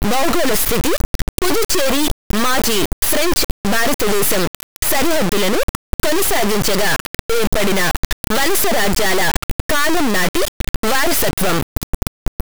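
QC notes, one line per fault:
Throughout: integer read as float. The 32-bit integer speech samples are decoded as 32-bit floats, giving values near zero or far beyond full scale. The waveform slams between silence and the clipping rails as a harsh square-wave buzz, with dense broadband harmonic striping on the spectrogram.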